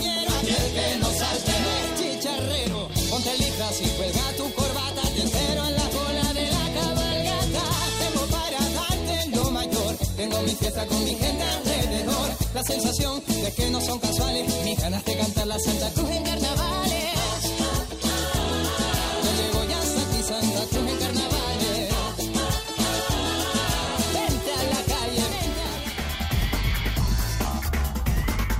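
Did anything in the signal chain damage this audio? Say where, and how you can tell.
Yes, at the codec stage. Compressed frames were skipped at 9.41 s and again at 25.31 s. At each point the audio jumps forward, losing roughly 70 ms of material. That jump fits a few whole frames of about 20 ms each. Either the frames never reached the file or the decoder rejected them as damaged.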